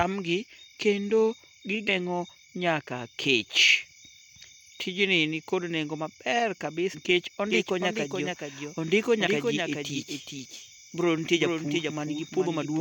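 A speech recording with two kinds of fault. Damaged data in the compressed stream makes the decoder lose frame sync, producing brief glitches at 1.88, 6.93 and 9.26 s. From 7.51 s to the end, a doubled audio track, likely from an edit holding two copies out of step, adds a dry full-band repeat around 400 ms late and about 5 dB quieter.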